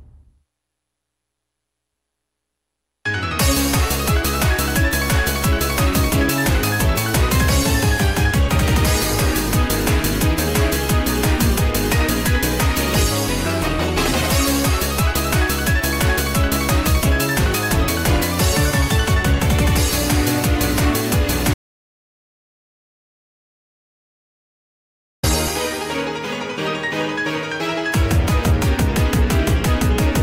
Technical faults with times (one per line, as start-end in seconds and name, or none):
21.54-25.23 audio dropout to silence